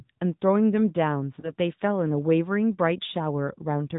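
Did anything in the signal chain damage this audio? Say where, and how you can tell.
Yes. The speech sounds buzzy and synthetic, with nothing above 4 kHz. This is the AMR narrowband mobile codec at the codec stage, and the damage fits roughly 10.2 kbps.

From 1.40 to 1.52 s there is a brief dip and warble. One lost AMR speech frame, about 20 ms, was concealed by the decoder reusing the previous frame's settings at falling gain.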